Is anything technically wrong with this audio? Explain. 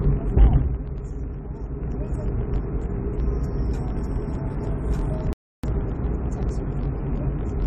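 Yes. Throughout, a filter restarted on every block adds a regular tick at 46.9 Hz. It fits a 1024-sample block, with each block starting from silence. The ticks rise and fall with the level.

From 5.33 to 5.64 s there is a rebuffering stall. Playback runs dry and falls silent for about 0.31 s. Then it resumes exactly where it stopped, with nothing lost.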